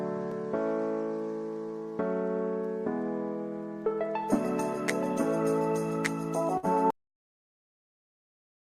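At 6.57 s a burst of packet loss hits the stream: a short run of packets either never arrived or arrived too late to play. The receiver covers about 54 ms by stretching the last sound it had and fading it out, so for a moment the audio smears into a held, dimming sound before it jumps ahead at 6.65 s. That jump skips about 60 ms of the original, which is simply gone.

From 6.90 s to the end, the input stops reaching the recorder, most likely through a disconnected device, a dropped link or an accidental mute, while the file keeps being written with silence. The result is an audio dropout to silence. The sound cuts off abruptly mid-flow, and what follows is dead digital silence with no room tone underneath, lasting the remaining stretch of the clip.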